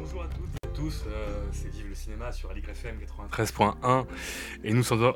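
From 0.57 to 0.65 s there is an intermittent contact fault. A loose cable or plug briefly loses connection. The sound drops out for about 54 ms. Crackle marks the break and the return. Faint hiss remains while the line is open.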